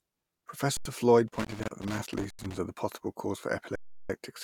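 At 0.77 s the speech freezes for about 85 ms. This is an underrun with held sample. The output buffer ran dry and the converter held its last value. The gap fits a 4,096-sample block. Nothing is lost, so playback resumes where it stopped, softly.

From 1.28 to 2.58 s there is loose connector crackle. A bad contact makes and breaks as it moves, chopping the signal. It sounds like irregular scratching.

Inside it, at 2.30 s, the sound holds again for about 85 ms. At 3.76 s a longer hold lasts about 340 ms.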